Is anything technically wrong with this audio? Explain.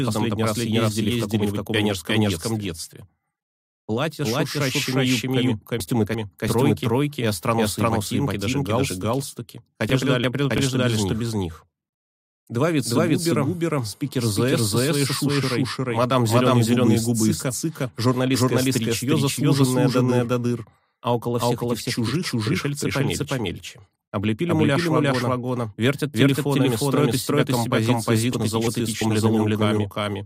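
Yes, two things.

There's a doubled audio track running the whole way through. A second full-band copy of the sound trails the original by around 400 ms, at roughly the same level. It's completely dry, with no decay and no room colour, so it comes across as a hard, slapback-style repeat rather than reverb. The likely cause is the same signal being captured a second time through a slower path, or an edit holding two copies out of step.

Chunks out of order show up three times: 5.80 to 6.49 s, 9.90 to 10.58 s, and 28.33 to 29.01 s. Each spot is about 0.68 s long, which fits two neighbouring 341 ms chunks played in swapped order, with the late one landing after the chunk that should have followed it. Nothing goes missing, but the sequence is scrambled, so you hear a brief jumbled stretch.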